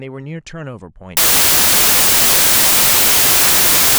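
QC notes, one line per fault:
1.17 s to end (about 4.0 s): samples built from the wrong bytes. From this point the speech turns into loud, broadband noise, because each sample is being assembled with its bytes misaligned or in the wrong order, so the rapidly changing low-order bits end up as the dominant part of each value. Unlike dither or ordinary background hiss, the noise is loud and harsh.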